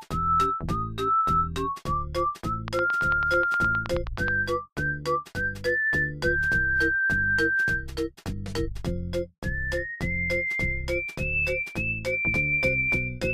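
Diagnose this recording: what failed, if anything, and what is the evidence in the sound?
A train of clicks runs from 2.68 to 4.29 s: about fifteen evenly spaced ticks at 9.4 per second, about 15 dB above the sound, likely interference picked up in the analogue wiring.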